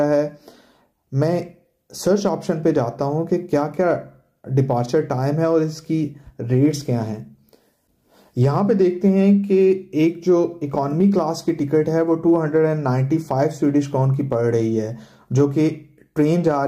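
No technical faults are audible anywhere in the audio.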